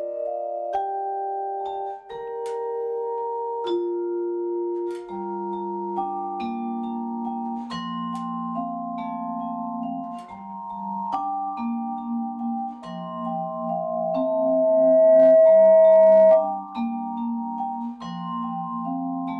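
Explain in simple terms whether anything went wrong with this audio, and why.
Loudspeaker feedback squeal, 12.82 to 16.60 s: the mic heard its own speaker, so a 643 Hz tone fed itself and swelled over about two seconds.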